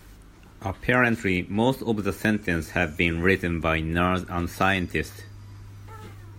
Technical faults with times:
none

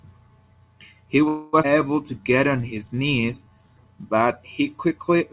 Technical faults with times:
1.28-1.55 call audio freeze
1.63-1.65 skip ahead
1.70-3.68 jitter buffer slow-down

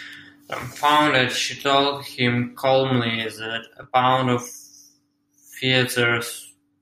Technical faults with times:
3.83 overlapping chunks

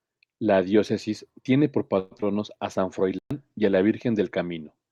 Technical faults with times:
1.99-2.13 call audio freeze
2.17-2.37 short concealed packet loss
2.73-4.91 call bitrate drop
3.19-3.31 playback stall

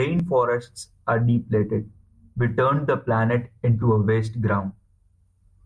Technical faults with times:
none

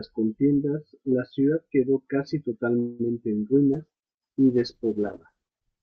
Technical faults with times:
2.79-3.01 call audio freeze
3.74-5.82 call bitrate drop

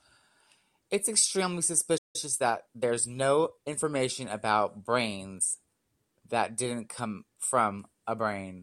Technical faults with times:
1.97-2.16 playback stall
2.16-3.80 time-compressed catch-up

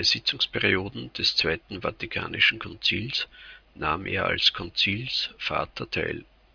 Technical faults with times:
none

